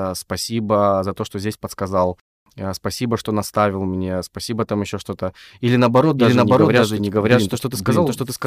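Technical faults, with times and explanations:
6.18 s to end, doubled audio track. A full-band copy of the speech cuts in abruptly, about half a second behind, at roughly equal level. It has no decay or room colour. The likely cause is a slower second capture path or a misaligned edit.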